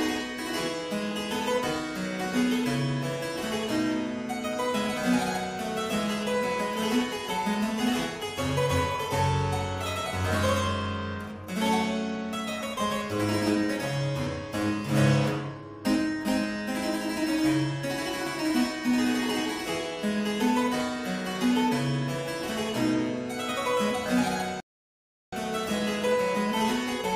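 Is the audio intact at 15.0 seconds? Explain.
Yes, the audio at 15.0 seconds is intact, with no dropout, click, distortion or other fault at that moment.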